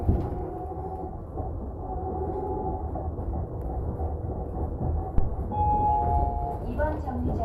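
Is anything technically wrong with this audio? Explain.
Yes. There are three faults.

At 1.18 s there is a skip ahead. Roughly a third of a second of audio was dropped while later audio was already queued, either lost in transit or discarded when the jitter buffer overflowed. Playback jumps straight across the gap, and the two sides are spliced with no silence between them.

From 1.28 to 4.44 s, jitter buffer speed-up follows. Too much audio had built up in the buffer, so the receiver trimmed many tiny pitch-period slices to catch up. About 150 ms in total was removed. The sound runs about 5% fast at unchanged pitch and feels slightly hurried.

From 5.18 to 5.33 s there is a phantom power thump. A supply was switched on or off on a live input, and the voltage step passed through the coupling capacitors. It is heard as a deep thud that dies away in about 34 ms.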